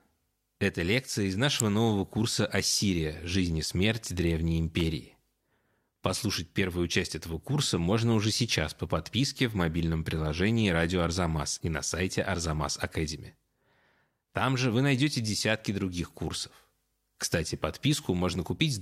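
Speech, with two sharp snaps at 1.60 s and 4.80 s, the first loud and the second fainter. Each is likely an electrical switching spike from a nearby arc.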